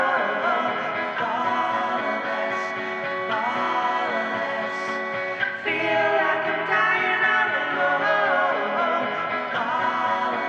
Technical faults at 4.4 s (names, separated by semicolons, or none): none